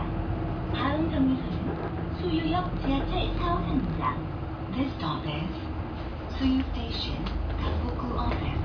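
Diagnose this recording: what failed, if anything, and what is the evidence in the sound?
Nothing failed in this recording, and the sound gives no evidence of any fault at any stage.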